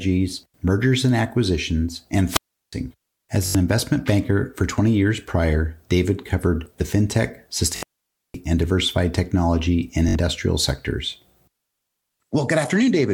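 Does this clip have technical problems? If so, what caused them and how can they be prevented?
Yes. Right after "mergers and acquisitions", at 2.26 to 2.73 s, hiss rises and the sound falls into a hole of near silence lasting about 0.36 s. A second such hole, about 0.52 s long, runs from 7.66 to 8.39 s, just before "and diversified technology and". This is a wireless microphone squelch dropout: the analogue FM radio signal faded until the receiver's squelch muted the output. Keeping the transmitter in clear line of sight and close to the receiver, with fresh batteries and diversity antennas, prevents it.

At 3.46 to 3.55 s, just before "investment banker for", a short slice repeats as a buzzing stutter. The same happens at 7.76 to 7.83 s, inside the second dropout, and at 10.09 to 10.15 s. This is Bluetooth stutter: packets arrived late or not at all, so the receiver replayed its last buffer. 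When the sound resumes, it skips ahead as if it had kept playing, about 85 ms in the first case and 64 ms in the others. The first gap points to several consecutive lost packets. Shortening the Bluetooth link, reducing 2.4 GHz interference, or recording over a wired connection prevents it.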